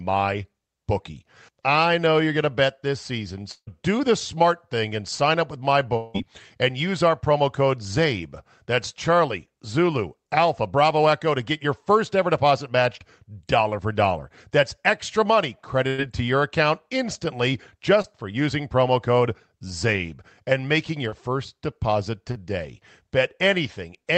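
From 3.51 to 3.69 s and again from 5.97 to 6.16 s, the speech is likely broken by a long network dropout. In the first, the last sound is carried on as a fading fill for about 150 ms, then about 70 ms of silence follows before the speech resumes further on. In the second, the fill runs about 175 ms of the 180 ms lost, with no silent stretch. Compared with a burst of packet loss, these gaps run longer and lose more of the speech.

A burst of packet loss hits at 15.88 to 16.00 s. About 100 ms of speech is gone, and the receiver holds the last sound and lets it weaken before the speech picks up again past the hole. The missing span is shorter than the dropouts. That points to a few consecutive packets lost rather than the stream stopping.

Short concealed packet loss occurs three times. At 18.02 to 18.06 s it falls between "to your account instantly" and "for using promo code". At 21.10 to 21.14 s it falls between "and making" and "first deposit". 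At 22.32 to 22.37 s it comes right after "first deposit". Each hole is only 20 to 40 ms, filled by extending the preceding sound and blending back, so it comes across as a brief smear or wobble rather than an audible gap. The top end of the whole clip stops near 8 kHz, which fits a wideband call codec.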